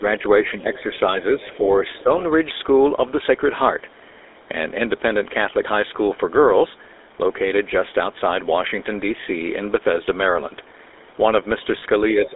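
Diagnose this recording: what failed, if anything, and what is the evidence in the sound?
GSM full-rate codec, throughout: The codec stage has left the whole recording buzzy and gravelly, with the roughness plainly audible. Energy is confined to roughly 300 Hz to 3.7 kHz, which fits the 13 kbps full-rate coder. That coder models the vocal tract as a filter and excites it with a coarse, regularly spaced pulse train that keeps only every third excitation sample. The lost fine detail in that excitation is what produces the grainy texture on every syllable.

Speech suppressed in double talk, at 0.00 to 0.04 s, 0.51 to 0.76 s, 1.54 to 1.65 s, 2.02 to 2.10 s and 12.14 s to the end: These are call-processing dips in the talker's level. The speech sinks by about 5 to 10 dB for tens of milliseconds up to about 150 ms before recovering. The likely cause is the echo canceller's suppressor. With both ends talking at once, it could not tell the near talker from the loudspeaker echo, so it attenuated everything.

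Other side's voice leaking through, at 0.74 to 0.99 s and 1.96 to 2.03 s: A faint second voice sits underneath, at about 25 to 30 dB below the main speech. It is brief. The likely cause is residual acoustic echo. The far end's voice played from the device's loudspeaker was picked up by the microphone, and the canceller did not fully subtract it. Both stretches overlap the suppression dips at 0.74 s and around 2.0 s.

Lost GSM frames, at 11.78 to 11.83 s: A short metallic, ringing hold of about 40 ms replaces the speech there, which fits two 20 ms frames discarded in the network or radio link. The decoder concealed the gap by reusing the last good frame's parameters. That is why a frozen, tonal smear is heard instead of silence or a click.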